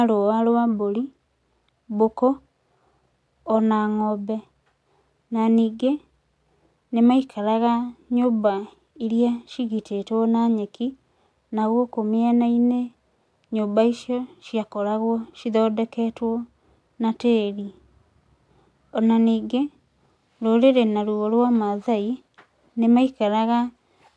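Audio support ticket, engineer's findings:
No audible faults found on this speech recording.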